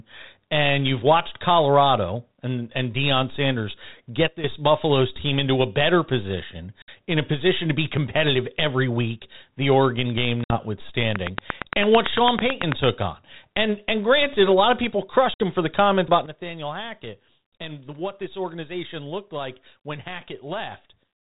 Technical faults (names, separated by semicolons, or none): sudden gain jump; packet loss on an ADPCM call; train of clicks